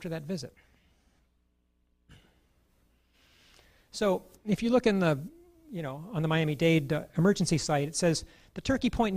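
Nothing goes wrong anywhere in the clip, so there's no fault to point to at any moment.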